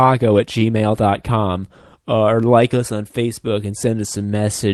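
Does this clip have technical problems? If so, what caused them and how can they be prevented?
Yes. Clock drift between sender and receiver runs throughout. The sender's clock is roughly 3 percent slow, so the jitter buffer keeps draining. Adaptive resampling at the receiver prevents this.

Repeated timing corrections run from 0.02 to 4.42 s. The receiver repeats short pieces, slowing playback to 97 percent and adding about a tenth of a second. These are small and unevenly spaced. Smoother time-stretching would hide them.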